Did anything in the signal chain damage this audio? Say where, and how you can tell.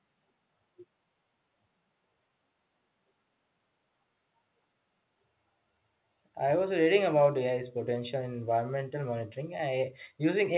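No, nothing in this chain damaged the speech.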